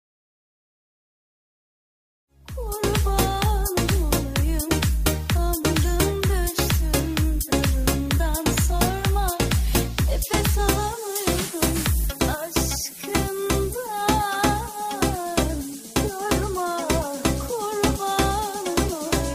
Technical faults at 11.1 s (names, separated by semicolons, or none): none